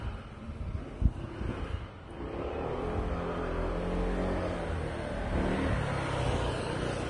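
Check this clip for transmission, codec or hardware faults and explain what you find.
One fault runs through the whole clip: heavy codec damage, most likely Vorbis compression. Nothing is present above about 10.6 kHz, and the treble that remains is hissy and grainy, with roughened tones and softened attacks. The encoder models a smooth spectral floor and then quantises the residue so coarsely that fine high-frequency detail becomes noise of similar energy. That points to a low bitrate, around 30 kbps. A plain low-pass filter would dull the top end cleanly, and MP3 tends toward warbling swirl, but here the high band is noisy and grainy rather than simply absent or warbling.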